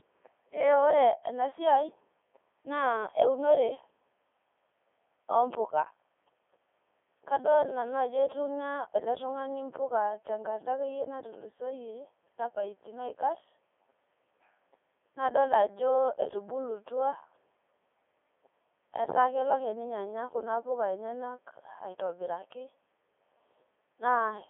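The whole clip has been through a Codec 2 vocoder at 3.2 kbit/s. It transmits only pitch, voicing and spectral envelope and resynthesises from sine waves. The result is robotic, buzzy speech squeezed into a 300 Hz to 3.5 kHz band, with nothing above 3.7 kHz.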